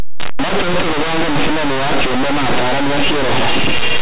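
Linear 8-bit samples are decoded as mu-law codes throughout this speech clip, a case of linear audio read as companded. Values just one side of zero expand to near-maximum outputs while others stay small, so the whole recording becomes harsh, very loud distortion.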